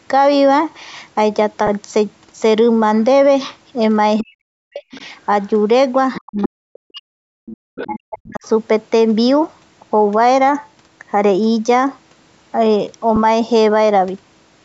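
A speech recording, band-limited at 8 kHz by call processing, shows four kinds of fault. Lost LE Audio frames hit at 1.67 s and 13.16 s, each a single 10 ms frame. The decoder refills the gap with a sign-scrambled copy of the previous spectrum rather than leaving silence. Speech suppressed in double talk pulls the talker down by about 40 dB at 4.2–4.85 s, 6.19–7.08 s and 7.85–8.43 s. The likely cause is the echo canceller failing to tell the talker from the loudspeaker echo. Unlike gating, it is the voice itself that dips or breaks up, and only while the far end is active. The other side's voice leaking through appears at 4.91–5.06 s (about 25 dB below the speech), 6.14–6.48 s (about 10 dB below) and 7.46–8.48 s (about 15 dB below). It is a second voice rather than a level drop, likely residual echo the canceller missed. Background gated by the echo canceller cuts the room sound by about 40 dB for roughly 100 ms at 7.36–7.46 s. 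It is distinguished from double-talk suppression because the ambience, not the talker, momentarily vanishes before returning.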